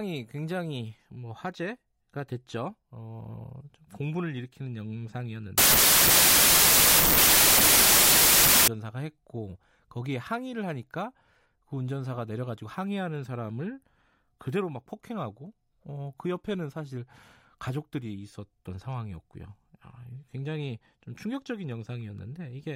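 A wrong sample width fault runs from 5.58 to 8.68 s. Packed 24-bit samples are read as 32-bit, so each value mixes bytes from neighbouring samples. The speech sits buried under loud noise, playing 1.33 times too fast and pitched up.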